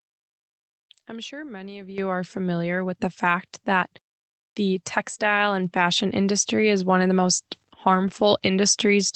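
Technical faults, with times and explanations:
1.98 s and 3.0 s, microphone volume stepped up: speech and background jump together, by about 10 dB then about 3 dB, as call software raised the microphone's input gain in single steps.
8.03 to 8.21 s, lost packet rebuilt from error correction: about 100 ms sounds rougher and noisier without a gap, since several lost packets were replaced by low-bitrate copies.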